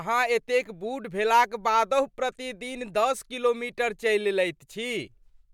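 No technical faults can be heard anywhere in this speech recording. Nothing interrupts, distorts or drops out of the audio at any point.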